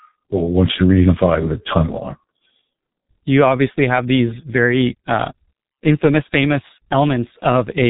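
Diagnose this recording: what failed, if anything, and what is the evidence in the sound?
The failure is at the codec stage: the speech passed through the G.723.1 codec with heavy damage throughout the recording. The spectrum stops dead at 3.8 kHz, so sibilants and consonant edges are missing and the voice sounds muffled. The codec's 30 ms frames and slowly updated vocal model smear transitions, giving a hoarse, blurred texture. That degree of coarseness fits operation at around 6 kbit/s.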